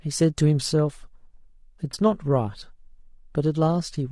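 The whole clip has that rough, grainy edge you get from low-delay AAC compression, likely AAC-ELD at around 32 kbps. At this low bitrate, noise creeps in between the voice's harmonics and the top end sounds thin and a bit synthetic.

Then from 1.91 to 1.94 s there's a brief AAC frame loss with concealment: about 20 ms, which sounds like a single missing frame. The decoder patches the gap from the previous spectrum, leaving a short smeared, noisy or phasey blip instead of a dropout.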